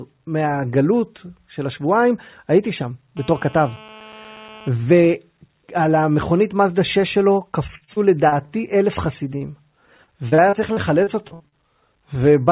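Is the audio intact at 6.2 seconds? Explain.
Yes, the speech at 6.2 seconds is intact, with only the narrowband call-path sound it carries throughout, where nothing reaches above about 4 kHz.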